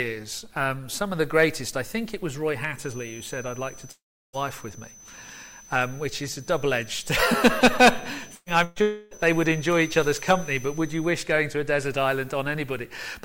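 From 2.71 s to 11.23 s a feedback whistle sits behind the sound: a thin, steady tone at 6.1 kHz, well below the main level and wavering slightly. The likely cause is a loudspeaker-to-microphone path held right at the edge of oscillation, so a single frequency rings on continuously without building into a runaway howl.

At 3.91 s a long network dropout begins and lasts until 4.36 s, removing about 0.42 s of audio. The likely cause is a stretch where no packets reached the receiver. It first extends the last sound as a brief fading buzz, then leaves roughly a third of a second of silence before the audio resumes further on, with the lost section simply gone.

Two bursts of packet loss follow, at 8.35 to 8.49 s and 8.64 to 8.79 s, each taking out about 120 ms. In both, the receiver stretches the preceding sound and lowers it as the gap continues, producing a short held buzz or fading hiss. 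The first burst decays into a moment of near-silence before playback returns. The second is bridged completely.

A second long network dropout runs from 8.82 s to 9.14 s, about 0.3 s missing. Here the concealment fill covers the whole gap, so it is heard as a sustained, fading continuation of the last sound with no silence, after which the audio jumps ahead past the lost portion.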